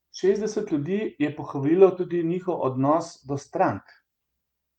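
No technical faults can be heard anywhere in the speech.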